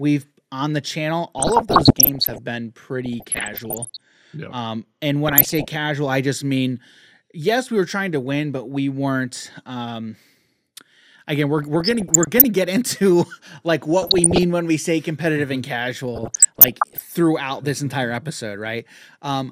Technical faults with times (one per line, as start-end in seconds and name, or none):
1.38-2.38 DAB burbling
3.06-4.01 DAB burbling
5.26-5.67 DAB burbling
11.58-12.44 DAB burbling
14.02-14.43 DAB burbling
16.15-17.14 DAB burbling